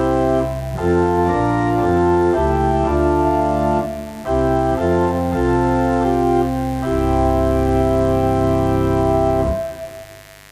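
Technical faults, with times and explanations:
Throughout: mains buzz. A steady, raspy buzz sits under all of the sound, roughly 25 dB below it, with a hard, gritty edge rather than a smooth hum. Sharp switching spikes, of the kind a dimmer, a rectifier or a missing shield lets into the signal path, arrive twice in every 50 Hz mains cycle. Their harmonics stack up well into the kilohertz range, so the interference is heard as a bright rasp rather than a low tone.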